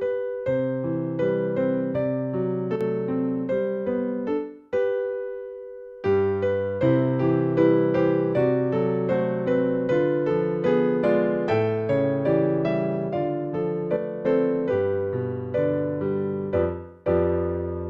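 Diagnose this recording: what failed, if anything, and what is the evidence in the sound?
The level falls abruptly by about 6 dB twice, from 2.76 to 2.81 s and from 13.96 to 14.25 s. This is one channel drops out, likely a loose contact in the analogue wiring. The mono sum loses half the shared signal and everything unique to that side.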